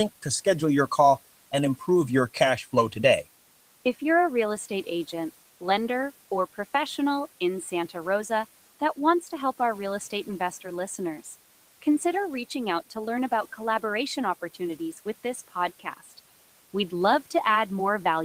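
A short speech recording with some room noise sitting about 25 dB under the voice, and one spot where the noise suppressor bites into the speech. Right after "with this", between 15.8 and 16.12 s, the suppressor mistakes part of the speech for background and turns it down along with the noise, by about 10 dB at its deepest. Only around a tenth of a second is actually affected, but that bit comes out swallowed and faint.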